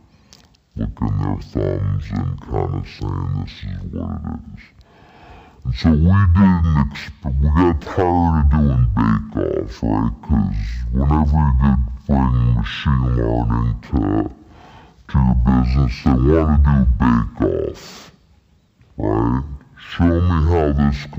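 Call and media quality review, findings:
Stereo read as mono, throughout: interleaved left/right samples decoded as one channel, so audio plays at half speed, an octave low. Probable component: channel-count handling in the decoder or player.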